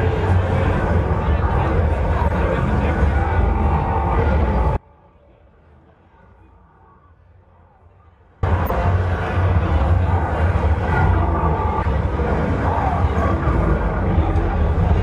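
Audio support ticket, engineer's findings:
Corrupt frame decoded: short chirps and blips at 0.75–0.80, 2.26–2.31, 4.40–4.44, 8.66–8.73, 10.61–10.65, 11.82–11.92 and 12.91–12.94 s. Decoder played bit-damaged frames, one to four frames each time, so energy lands at the wrong frequencies.

Audio dropout to a faint residue: signal cuts out abruptly at 4.77 s and comes back at 8.43 s, about 3.7 s gone. Only a faint leak remains, roughly 30 dB down. Likely an upstream loss with the downstream path still live.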